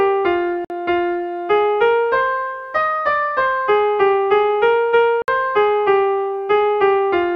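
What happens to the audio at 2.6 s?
Nothing goes wrong at 2.6 s; the audio plays through that moment intact, with no dropout, click, glitch or other fault.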